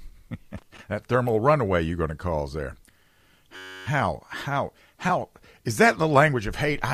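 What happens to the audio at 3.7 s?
A system hang loop runs from 3.56 to 3.86 s. The speech freezes into one 10.67 ms slice repeating exactly, which fits a 512-sample buffer. The hardware kept replaying it while the system stalled. It sounds like a steady 93.8 Hz buzz.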